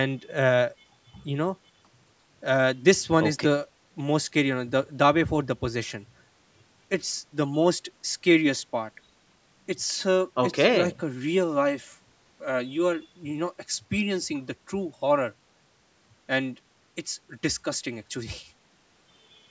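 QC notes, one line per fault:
Speech passes through call microphone processing with the lowest bass trimmed and nothing above 8 kHz, as expected for that path, and no faults are heard.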